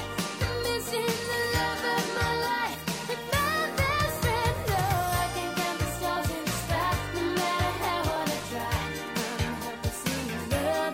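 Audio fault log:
0.18–10.17 s, periodic USB or driver dropouts: brief ticks recur every 2.0 s across this span. Each time, well under a millisecond of audio is skipped outright rather than silenced, consistent with the bus or driver being blocked at a fixed interval, so the waveform jumps and clicks wherever signal is present.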